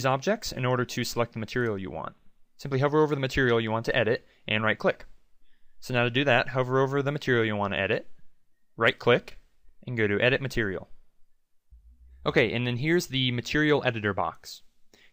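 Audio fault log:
9.28–9.31 s, loose connector crackle: a brief, ragged burst of scratchy crackle lasting about 33 ms, with the audio breaking up unevenly rather than dropping out cleanly. The roughness comes from a worn or dirty contact in the signal path shifting and rapidly making and breaking, so the sound is chopped into irregular fragments, giving the short gritty texture heard at this moment.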